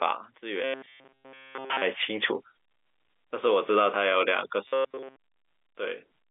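From 0.64 to 1.82 s the speech turns into a rigid, metallic buzz locked at 133 Hz: robotic sound from repeated short buffers, likely caused by a roughly 7.5 ms chunk being replayed almost continuously while fresh audio is skipped. Unlike telephone band-limiting, the buzz follows the original speech only roughly.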